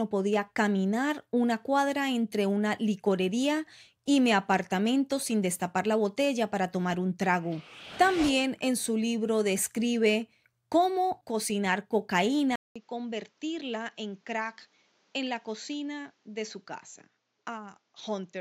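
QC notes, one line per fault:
12.56–18.4 s, input switched to a poorer device: after a 200 ms gap the speech turns duller, roughly 10 dB quieter, over a new hiss about 35 dB down, likely from a narrower-band microphone. Spectrogram shows a hard ceiling at 7.6 kHz; waveform shows the gap and a smaller envelope.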